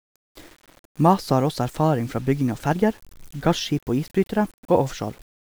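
No technical faults are audible.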